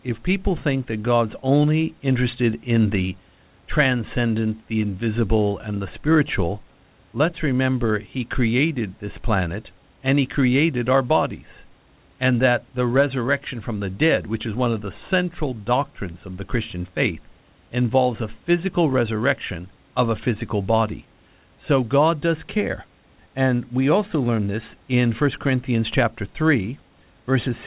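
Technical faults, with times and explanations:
No technical faults can be heard anywhere here.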